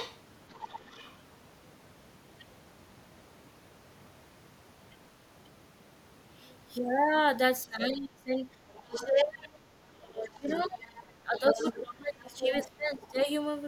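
From 0.0 to 1.15 s the other side's voice leaks through, about 15 dB below the talker, likely residual loudspeaker echo the echo canceller failed to remove. A faint trace recurs at 6.49 to 6.56 s, about 35 dB down.

From 7.65 to 8.36 s the speech is suppressed in double talk: the voice dips by up to roughly 25 dB, likely because the canceller turned both sides down when they overlapped.

At 8.64 to 8.71 s the background is gated by the echo canceller, dropping about 6 dB before recovering.

Leakage returns at 8.71 to 9.06 s, about 10 dB below the speech. From 9.04 to 13.28 s suppression in double talk makes the voice dip by up to about 25 dB, around 3 s in total. Within that span, echo leaks through at 10.48 to 11.77 s, about 15 dB down, and at 12.39 to 13.07 s, only about 5 dB below the speech.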